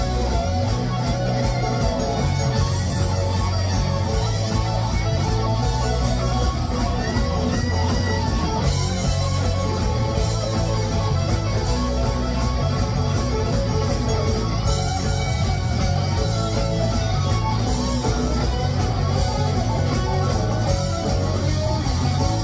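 No technical faults can be heard in this clip. At no point does anything in the audio signal a problem in how it was captured, processed or delivered.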